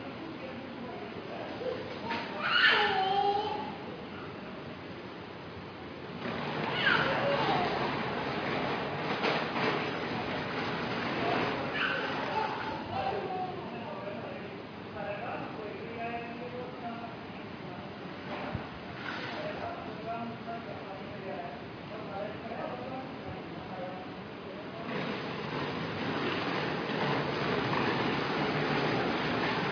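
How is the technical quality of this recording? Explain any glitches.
No glitches or faults are audible.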